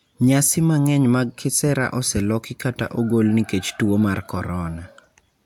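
A speech recording with nothing technically wrong with it.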